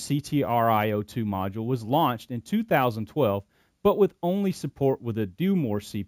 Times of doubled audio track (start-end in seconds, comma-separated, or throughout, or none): none